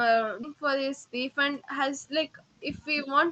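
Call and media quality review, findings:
Skip ahead, 0.43 s. Abrupt jump forward in the speech, no fill, sides spliced almost directly. Around 0.7 s of audio missing. Jitter buffer discarded a queued stretch, likely on overflow, cutting delay by about that much at once.

Jitter buffer speed-up, 0.54 to 1.86 s. Speech runs about 6% fast at unchanged pitch, slightly hurried. Receiver repeatedly trimmed pitch-period-sized pieces, roughly 70 ms in total, draining excess buffered delay. Opus band limit near 8 kHz throughout.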